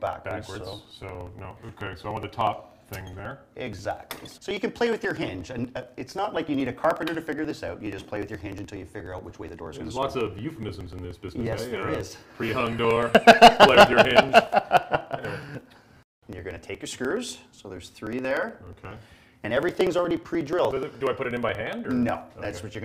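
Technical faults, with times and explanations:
0.07–22.75 s, periodic USB or driver dropouts: something stalls the bus every 60 ms, skipping about 4 ms of audio each time, which gives a steady tick under the signal.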